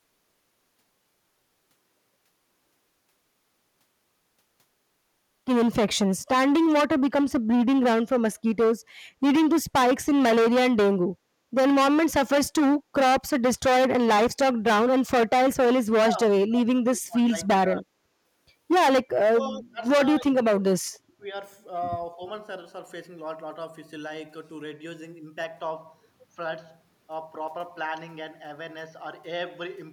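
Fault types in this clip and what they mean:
Speech suppressed in double talk: The speech sinks in level between 16.06 and 16.31 s, 16.47 and 17.98 s, 19.18 and 19.83 s, 20.22 and 21.25 s, and 22.15 and 22.21 s. The shallowest dips are about 10 dB and the deepest about 35 dB. This is likely an echo canceller turning down the near talker while the far end speaks. On a waveform the envelope caves in; on a spectrogram the harmonics fade or break into gaps.
Input switched to a poorer device: From 25.44 s to the end, the sound turns duller and narrower with no gap at the changeover and roughly the same loudness. The likely cause is the input moving to a lower-bandwidth microphone or headset profile. On a spectrogram, energy stops at a lower cutoff, leaving an empty band above it. A new noise floor, roughly 35 dB below the speech, fills the pauses as a faint haze.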